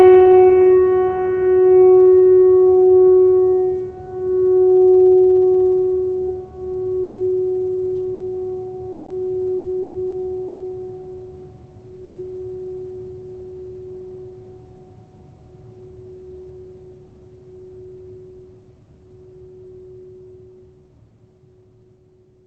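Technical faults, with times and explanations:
7.03–7.21 s, 8.14–8.23 s and 12.04–12.19 s, burst of packet loss: the music freezes into a held, fading tone for about 150 ms, 60 ms and 120 ms, then jumps ahead with 120 ms, 60 ms and 120 ms missing. The receiver extended the last sound across each hole, and the first jump also shifts timing by 30 ms.
7.18 s, 12.16 s and 12.34 s, lost packet rebuilt from error correction: three 60 ms frames sound rougher and grainier but leave no gap. The following packets carried low-bitrate copies of the lost ones, which the Opus decoder played in their place.
8.92–10.63 s, repeated packet loss (robotic sound): four holes, the longest 120 ms, cut out 420 ms of music in total and are patched with 420 ms of extended sound. About a quarter of the span is concealment, and roughly 200 ms is error-correction copies. The result is choppy.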